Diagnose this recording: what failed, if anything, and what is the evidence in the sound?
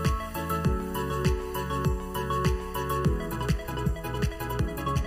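Channel delay (comb filtering) runs the whole way through: one channel lags by under a millisecond before the mono fold-down, cancelling a notch near 700 Hz and up the spectrum, so everything sounds hollow.

From 3.23 s to the end the pace jumps to roughly 1.64 times faster at unchanged pitch, rushed, likely a time-stretched section squeezed in editing or playback software.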